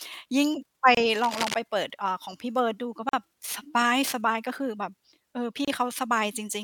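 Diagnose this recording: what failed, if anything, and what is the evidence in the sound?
The speech is cut by three short silences. They fall at 0.95 to 0.97 s, 3.09 to 3.13 s and 5.65 to 5.68 s, lasting 25 ms, 42 ms and 28 ms. Each is a gap at a join of encoded pieces, a codec and editing stage fault. The pieces were encoded separately and butted together untrimmed. Each keeps its encoder start delay and last-frame padding. So the sound stops abruptly, slightly smeared at the edges, then resumes where it left off.

From 1.13 to 1.54 s, dense, uneven scratching rides over the speech. It sits only about 5 dB below the speech, so it is clearly audible. This is cable scratch noise in the analogue wiring. The likely cause is a worn cable, connector or control being moved. Its contact resistance then jumps rapidly, and each jump adds a burst of noise. The bursts stop after about 0.4 s, when the movement stops.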